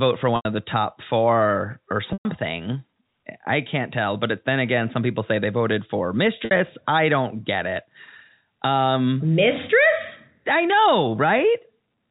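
Speech over a G.711 telephone path has three gaps from packet loss with pitch repetition, at 0.36 to 0.45 s (90 ms), 2.13 to 2.25 s (120 ms) and 6.45 to 6.51 s (60 ms). In each, the receiver fills the hole by looping the last pitch period, so the sound briefly holds on a buzzy, sustained tone. The 120 ms loss runs long enough for that tone to fade before the speech cross-fades back in.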